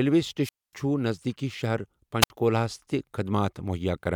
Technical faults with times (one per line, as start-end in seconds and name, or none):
0.42-0.74 wireless microphone squelch dropout
2.21-2.30 wireless microphone squelch dropout